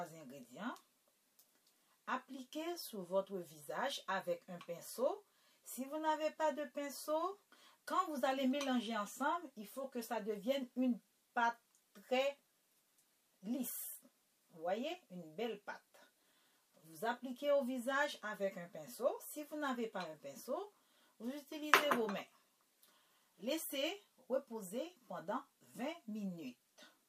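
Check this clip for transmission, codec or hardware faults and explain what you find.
I found no faults in this clip to explain.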